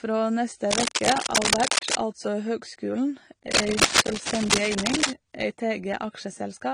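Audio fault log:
Throughout: AAC compression, likely AAC-LC at a rate that fits about 32 kbps. The codec damage is plainly audible, with a dulled, smeared texture. On a spectrogram, nothing shows above 15.3 kHz.
0.70 to 1.98 s and 3.51 to 5.10 s: cable scratch noise, just before "altså høgskulen" and again just after it. Rustling, scratchy bursts sit on the speech, roughly as loud as the speech in the first stretch and louder in the second. The likely cause is a moving contact whose resistance jumps rapidly. The waveform shows dense, irregular spikes, and the spectrogram shows broadband speckle.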